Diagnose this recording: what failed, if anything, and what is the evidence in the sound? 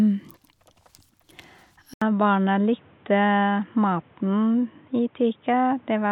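At 1.94 s the speech goes silent for about 80 ms. From there to the end it is band-limited, with nothing above 3.8 kHz, roughly 5 dB quieter, and carrying a new background noise sitting around 35 dB under the signal. This is most likely an input switched to a poorer device, at the driver or device stage: the system dropped to another microphone or a headset call profile. A codec bandwidth drop would not bring a new noise floor, a level step and a capture gap all at one instant.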